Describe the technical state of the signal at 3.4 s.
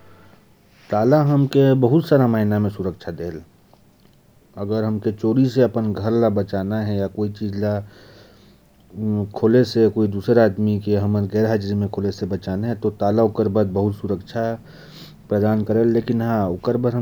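At 3.4 s the speech signal is intact, with no audible fault at that moment.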